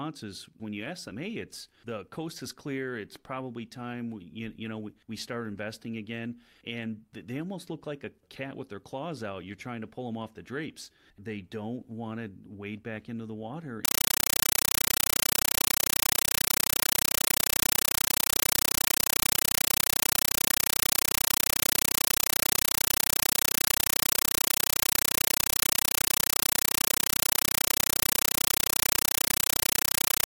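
At 13.85 s, just after "back into the water", the speech gives way to a compressed stream played as audio, and it lasts to the end of the clip. The link carried an AC-3 bitstream that was treated as PCM instead of being decoded, with a density that points to a 384 kbps stream. Each frame comes out as an 8.0 ms burst of noise followed by silent padding, repeating 31.25 times a second. The result is loud, harsh chattering static.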